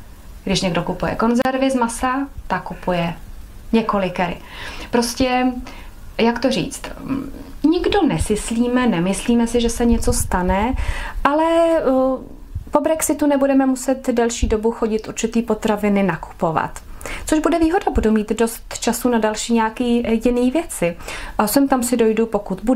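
At about 1.42 s there's a short drop-out, a gap of roughly 33 ms ending around 1.45 s. It's a gap at a join of encoded pieces. The audio was encoded in separate chunks and stitched together without trimming, so the encoder's start-up silence and end-of-chunk padding both stayed in. You hear a quick hole with edges smeared by the codec, and then the sound picks up right where it left off.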